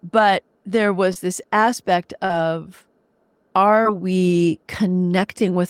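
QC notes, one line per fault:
1.13–1.17 s, 2.25–2.31 s, 3.83–3.87 s, short concealed packet loss: about 20, 40 and 20 ms of speech arrived too late for the decoder, so the receiver extended the preceding sound and crossfaded back, leaving brief smears.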